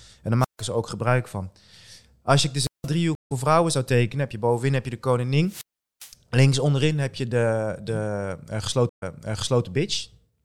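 At 0.40 to 0.62 s, just before "ze ook gebruik van", there's a wireless microphone squelch dropout: the radio signal fades, hiss swells, and the receiver mutes for about 149 ms. The same thing happens at 2.60 to 2.89 s (173 ms) and at 5.46 to 6.13 s, where the mute lasts 404 ms. Between those, at 3.15 to 3.32 s, a stream reconnect leaves 153 ms of silence, and the audio comes back a tenth of a second or so further on, at "vrouwen zou tekenen heb". A second reconnect at 8.89 to 9.64 s has 122 ms of silence, then jumps back 627 ms and replays material.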